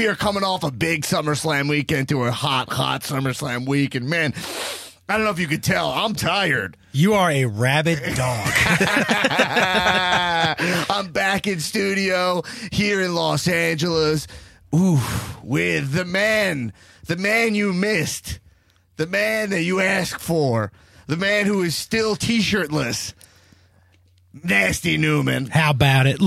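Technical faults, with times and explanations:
7.99–8.45 s, sudden gain jump: the level drops by about 6 dB in a single step, and the background noise falls with it, so it's the whole signal that's turned down. It holds at the lower level for roughly half a second, then snaps back up just as abruptly at 8.45 s. That instant step with no fade points to a likely cause of a digital gain setting applied straight away instead of being ramped in.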